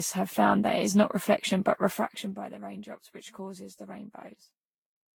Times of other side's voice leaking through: none

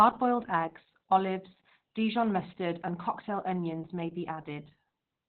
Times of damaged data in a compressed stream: none

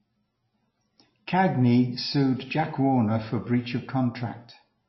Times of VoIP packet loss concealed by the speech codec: none

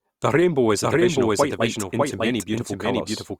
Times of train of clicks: none

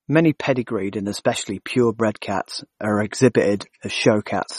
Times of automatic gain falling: none

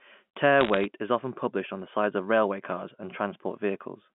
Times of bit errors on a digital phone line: 0.61-0.85

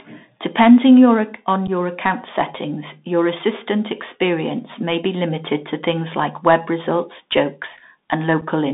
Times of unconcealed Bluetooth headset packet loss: 1.67, 8.41

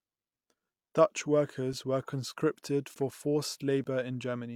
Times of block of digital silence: 2.94, 3.84

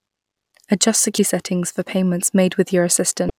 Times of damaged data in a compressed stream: 1.15-1.18, 3.27-3.30

